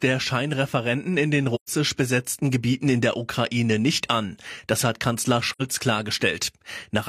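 Right after "in den", at 1.54 to 1.70 s, the speech drops into a soft-edged hole, and again at 5.52 to 5.62 s. That's AAC frame loss with muting: the decoder zeroed missing frames, so the overlapping windows fade out and back in.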